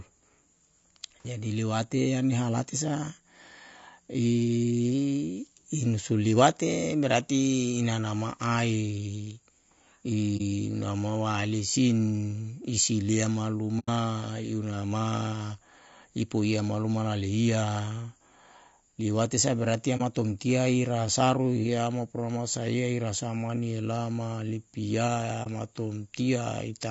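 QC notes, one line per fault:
throughout: low-delay AAC compression. The speech sounds rough and grainy, likely from AAC-ELD near 32 kbps: its short frames resolve pitch harmonics poorly. A spectrogram shows noise filling the gaps between harmonic lines and a thin or synthetic-looking top band.
10.37–10.41 s, 13.79–13.89 s, 19.97–20.02 s (between "liwate saa berarti" and "tomtia i rasaru hiama"), 25.43–25.48 s (after "olama lipia"): AAC frame loss with muting. Brief soft holes, about 30 ms each except the 90 ms gap at 13.79 s, which fits three lost frames. Overlapping windows taper the edges, so the waveform narrows smoothly into a dip and the spectrogram shows soft-edged gaps.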